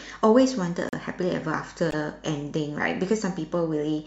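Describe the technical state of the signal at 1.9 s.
At 1.90 to 1.94 s the speech is interrupted by a corrupt frame decoded: a single compressed frame with damaged bits was played as if valid, so misread gains and codes put energy at wrong frequencies, heard as a brief chirp, squeak, blip or burst of noise peaking around -15 dBFS.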